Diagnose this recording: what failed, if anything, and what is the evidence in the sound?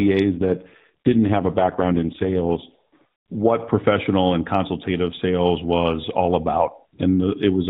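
The failure is in the network-controlled codec stage: an AMR rate drop. From 0.3 s to about 3.4 s the speech turns rougher, buzzier and more synthetic. The band stays the same, still stopping at 4 kHz as narrowband AMR does. There is no gap. The roughness fits the rate falling from 12.2 kbps to the 4.75 kbps mode. With fewer bits, fewer excitation pulses model each subframe. After about 3.4 s the rate recovers, leaving only light codec colouring.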